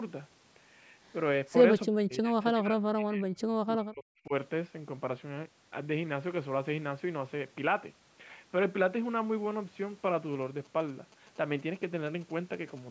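A speech recording with two faults. From 1.89 to 4.33 s the voice dips hard. At its deepest it falls by roughly 40 dB. Around two seconds of that span are affected. This is likely speech suppressed in double talk. The far end was talking at the same moment. The echo canceller could not tell this voice from its own loudspeaker echo, so it turned both down. From 10.33 to 12.79 s there are GSM signalling bursts. A galloping pattern of short buzzes sits about 25 dB below the signal. The buzz repeats at 217 Hz. That rate points to a nearby 2G phone exchanging signalling with the network. The audio circuit picks up and rectifies those radio bursts. The clip also carries nothing above 8 kHz, which fits the call microphone processing it went through.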